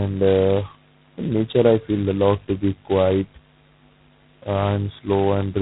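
From start to finish the speech passes through G.726 ADPCM at heavy damage, consistent with its lowest 16 kbit/s mode, where only two bits per sample describe each prediction error. The coarse steps leave a harsh, rasping hiss that rises and falls with the speech level, and nothing above 3.9 kHz remains.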